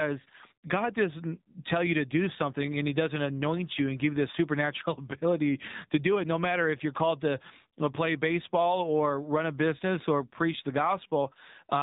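From start to finish the speech carries the AMR narrowband mobile codec sound. Nothing passes above 3.8 kHz, so a spectrogram shows a flat ceiling with empty space above it. The low bitrate, which fits 7.4 kbps, makes the speech buzzy and synthetic, with plainly audible codec damage throughout.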